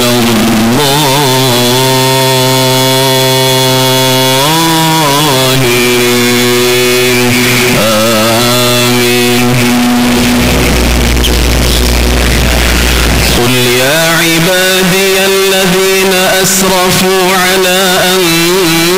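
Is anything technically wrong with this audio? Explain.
Yes. A float read as integer fault runs throughout: the audio was likely stored as 32-bit float but read as 32-bit integer, so sign and exponent bits set each level. The waveform turns near-square at an almost fixed, high level, very loud and harsh, with background noise as loud as the main sound, though pitch remains traceable.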